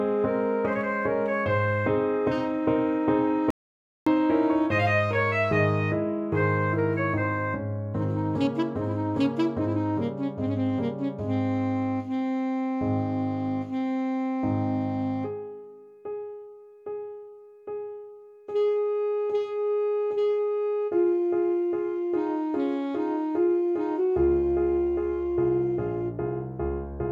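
At 3.50 s the audio cuts out abruptly and stays dead until 4.07 s. This is an audio dropout to silence. For about 0.56 s there is silence, with no room tone or background underneath. The sound then resumes mid-flow, as if nothing had paused. Whatever occurred in that half-second is simply missing. The likely cause is a brief loss of the input signal, such as a disconnected device or a failed link.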